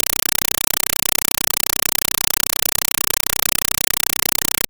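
Speech, but an undecoded 256 kbps AC-3 stream is output as plain samples. This compressed stream played as audio sounds throughout like loud, chattering static: 5.33 ms noise bursts 31.25 times a second.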